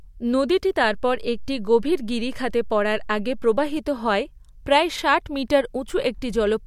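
Speech with a DC step at 0.84 s, a sudden shift in the waveform's zero line, heard as a low thump, lasting until 3.77 s while the speech continues unchanged.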